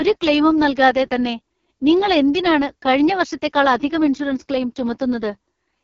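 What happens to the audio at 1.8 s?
At 1.8 s you're hearing the AMR wideband (HD Voice) codec, and it's there from the very start of the clip to the end, not just at that moment. The speech has a rough, raspy, buzzy edge, which points to the codec's lowest rate, around 6.6 kbit/s. At that rate the pulse-driven vocal tract model can't follow the voice closely. The top of the band is just synthetic noise, and nothing reaches past about 7.4 kHz.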